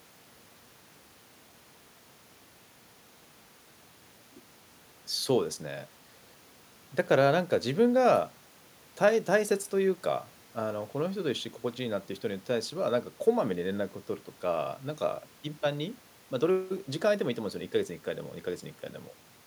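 No technical faults can be heard anywhere in the speech recording. There is nothing to place on a timeline, and no moment in the audio stands out as going wrong.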